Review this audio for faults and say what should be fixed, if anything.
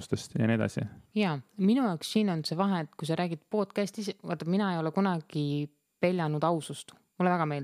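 Nothing stood out on listening to this speech recording, so there is nothing to fix.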